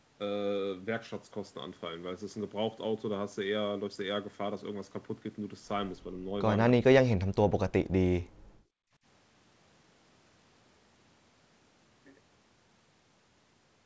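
A speech recording carried over a wideband call path, with nothing above 8 kHz, which fits a G.722 codec. The speech is suppressed in double talk twice, from 6.75 to 6.86 s and from 7.07 to 7.36 s. Each time it drops by roughly 40 dB, likely because the echo canceller mistook the talker for loudspeaker echo while both sides spoke. Separately, from 8.23 to 9.0 s the background is gated by the echo canceller: the room sound falls by about 38 dB for around 0.7 s during loudspeaker playback, then returns. What sets this gating apart is that it empties the background, while the earlier dips cut into the talker's own speech.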